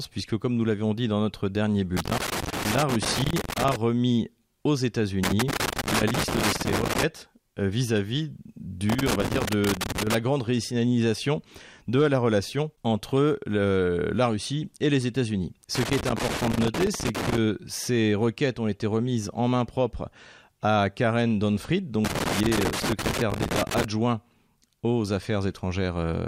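Loose connector crackle hits five times, from 1.97 to 3.76 s, 5.23 to 7.03 s, 8.90 to 10.15 s, 15.75 to 17.38 s and 22.05 to 23.84 s. Each burst is a ragged scratchy crackle where a worn contact keeps dropping and reconnecting the speech.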